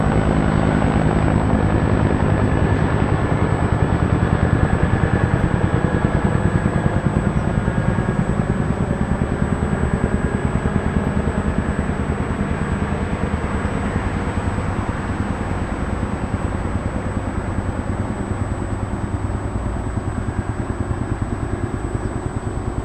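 A recording of sounds with USB whine sitting under it the whole way through: a fixed-pitch tone at 8 kHz, roughly 30 dB below the sound. That pitch matches the 125-microsecond microframes of a USB bus, whose current draw is leaking into the audio through power or ground.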